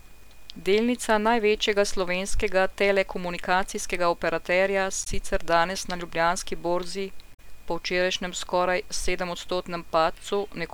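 Speech recording with two bursts of damaged data in a compressed stream, at 5.00–5.07 s and 7.30–7.40 s. At each point corrupted bytes make the decoder misread its frames and lose sync until it finds the next valid frame header, so a brief squawk or chirp replaces the sound. A spectrogram would show short vertical blocks of smeared, unnatural energy across the bands, and the waveform an abrupt discontinuity with odd, jagged samples lasting 70–100 ms.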